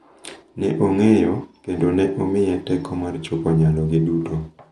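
From start to finish the speech sounds dull, with nothing above 11.5 kHz, and a rough, fluttering noise clings to voiced tones. The likely cause is Dolby Digital compression at a low bitrate, consistent with about 64 kbps. Short of bits, the encoder trims the upper band and leaves many frequency lines without mantissa detail; the decoder substitutes dither noise in those gaps, producing the grainy flutter and the lost brightness.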